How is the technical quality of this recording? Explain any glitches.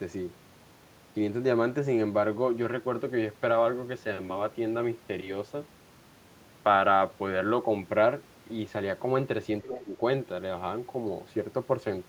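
Two short, overlapping glitches cluster near 9.6 to 10.0 s of this speech clip.

From 9.64 to 9.79 s a faint second voice, roughly 15 dB below the talker, slips through. This is likely the other side's voice leaking through: loudspeaker echo the canceller missed.

From 9.65 to 10.0 s the talker's level sags, by up to about 15 dB, likely speech suppressed in double talk, as the canceller ducked both overlapping voices.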